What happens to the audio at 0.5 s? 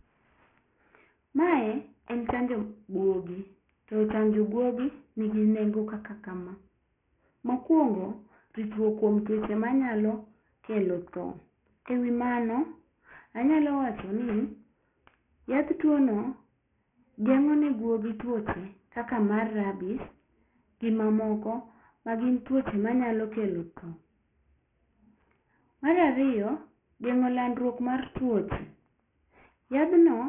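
At 0.5 s the speech carries aliasing, present across the whole clip. Content above 3 kHz has folded back below that edge, which fits a drop to a 6 kHz sample rate without filtering. Sibilants turn gritty and metallic, with mirrored energy roughly 20 dB under the speech. A spectrogram shows energy running hard up to a 3 kHz ceiling.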